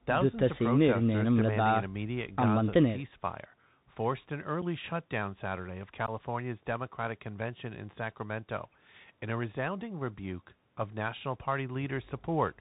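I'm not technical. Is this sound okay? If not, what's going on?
No. The speech went through a Bluetooth CVSD headset codec, an old narrowband phone-headset format, so everything above 4 kHz is gone, s sounds are scratchy, and grainy hiss sits underneath.

There is also unconcealed Bluetooth headset packet loss: tiny chunks of audio were lost between the headset and the phone, leaving abrupt gaps, briefly at 4.62 s and about twice as long from 6.06 to 6.10 s.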